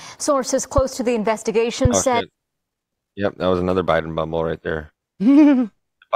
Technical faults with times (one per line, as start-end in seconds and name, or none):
1.85-1.88 loud pop